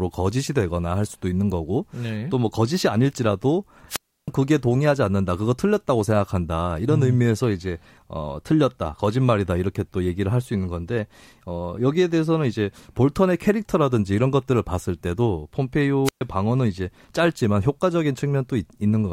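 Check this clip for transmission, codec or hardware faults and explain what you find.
Two wireless microphone squelch dropouts, at 3.88 to 4.29 s (about 0.32 s muted) and 16.04 to 16.21 s (about 0.12 s muted). The fading radio signal triggers the receiver's squelch. A rise of hiss before each silent hole sets these apart from clean packet-loss gaps.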